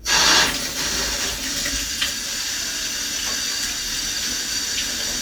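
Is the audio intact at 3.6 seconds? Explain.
Yes, the audio is intact at 3.6 seconds, with no dropout, click, distortion or other fault at that moment.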